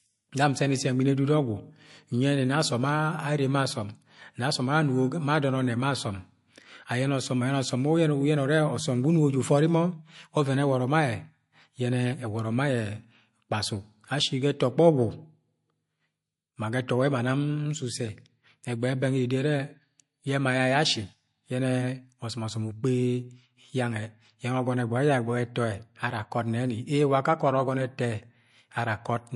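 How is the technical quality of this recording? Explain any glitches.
The recording shows plainly audible codec damage throughout. The speech has a hard treble ceiling at 11.3 kHz and a watery, swirling texture, likely MP3 compression at a bitrate consistent with about 48 kbps. Short of bits, the encoder discards weak frequency lines frame by frame, so s sounds chirp metallically and consonant attacks smear.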